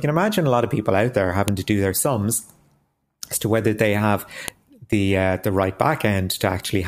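At 1.48 s, between "of people out there" and "to do their sums", a sharp, loud click cuts through the speech. It recurs at 4.48 s, after "to whether they have" and before "the uh the". This is a file header played as audio: the stream was assembled from 3-second WAV pieces whose header bytes were not stripped, so each join injects a brief burst of non-audio data that snaps regardless of the signal.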